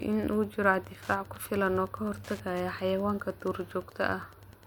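Speech runs through the whole clip with Wi-Fi interference underneath: a steady tick about ten times a second, matching a 102.4 ms beacon period. A nearby Wi-Fi radio's beacons are getting rectified by the audio circuit, sitting around 30 dB below the speech.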